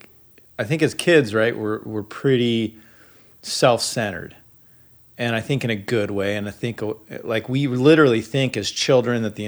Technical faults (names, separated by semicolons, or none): loud pop